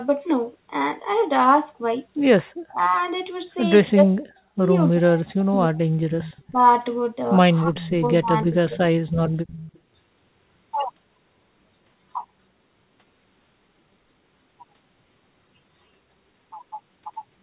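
At 2.63 to 2.93 s the level falls away sharply, roughly 40 dB at its deepest, and it happens again from 3.92 to 5.86 s, affecting about one and a half seconds. This is speech suppressed in double talk. The likely cause is an echo canceller that, with both ends talking at once, could not tell its own talker from loudspeaker echo and turned both down. On the waveform the envelope collapses into near-silent gaps. On the spectrogram the energy, which stops at 4 kHz on this G.711 A-law call path, fades out in dark vertical slices.

At 6.21 to 6.43 s an echo leak appears: a copy of the sound arriving 302 ms late, about 15 dB below the direct signal. It most likely comes from a far end playing the call on a loudspeaker, where the canceller left part of the microphone pickup in place and sent it back. On a spectrogram it shows as a faint repeat of the earlier harmonic pattern, shifted about 0.3 s to the right.

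Suppression returns at 6.44 to 6.62 s at about 35 dB. From 7.62 to 8.79 s it comes back again, shallower at about 25 dB, with the level dipping over roughly 0.7 s.

Inside that span, at 7.81 to 7.89 s, a brief scrap of the same 302 ms echo comes through at about 15 dB down. A longer stretch follows at 9.47 to 9.79 s, quieter at about 20 dB below the direct sound. Both show as a faint trail behind the preceding energy.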